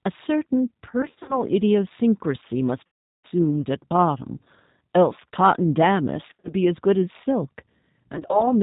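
A speech clip carried over the G.729 codec, which fits an 8 kbit/s stream; it sounds rough and synthetic, with nothing above 4 kHz. There's also VoIP packet loss concealed by the speech codec at 1.02–1.42 s, 2.87–3.26 s, 6.28–6.53 s and 8.13–8.53 s, where the decoder stretches the last sound into a fading buzz or coloured noise while the missing audio is patched over.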